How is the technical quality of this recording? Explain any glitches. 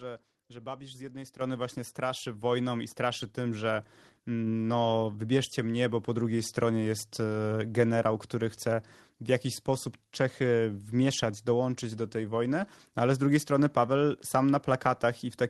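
One glitch stands out, heard through a call codec that adds its usual coding noise and removes everything above 12 kHz. Microphone volume stepped up at 1.41 s, between "z jednej" and "właśnie straszy": the software raised input gain about 8 dB at once, so voice and background jump together.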